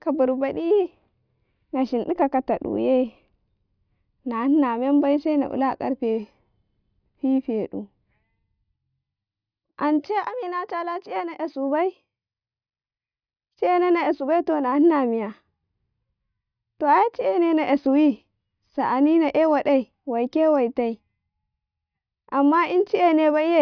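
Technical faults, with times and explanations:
Nothing stood out on listening to this speech recording.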